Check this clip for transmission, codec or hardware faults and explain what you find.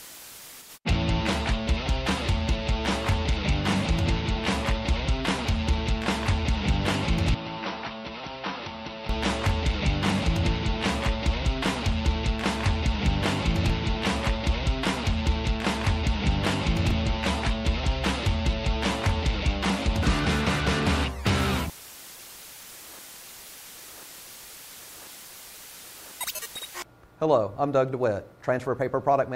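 One fault. From 7.35 to 9.09 s, the input likely switched to a poorer device. Nothing passes above 5.9 kHz. Level drops about 10 dB. New noise sits around 30 dB down. There's no silence at the switch.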